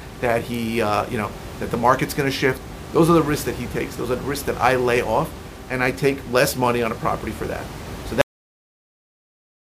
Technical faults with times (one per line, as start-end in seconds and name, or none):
8.21-9.74 cut-off end